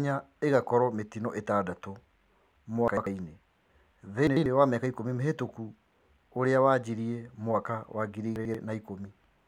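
Chunks out of order three times: at 2.88 to 3.07 s, 4.27 to 4.46 s and 8.36 to 8.55 s, a roughly 93 ms chunk arrives one chunk late and plays after its successor, so the speech briefly jumbles across three hard joins.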